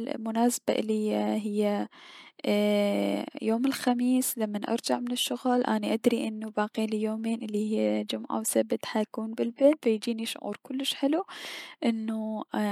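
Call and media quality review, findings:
Nothing to log here; I went through the whole speech recording and didn't hear any faults worth opening a ticket for.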